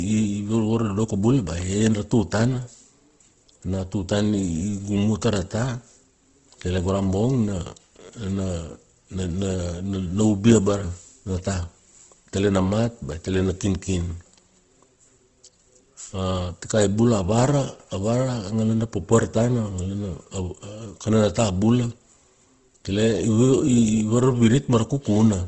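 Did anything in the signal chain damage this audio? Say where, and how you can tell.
Yes. At the codec stage, the speech sounds grainy, rough and plainly noisy throughout, with nothing above about 8 kHz. This points to Opus compression, likely in its CELT mode at a rate around 16 kbps, where band energies survive but fine detail is filled with noise.

At the driver or buffer stage, there are dropped samples. A single sharp click sits at 13.12 s, just before "i tele na kinkin". A tiny fraction of a millisecond of samples was likely skipped, so the waveform jumps abruptly without removing any audible sound.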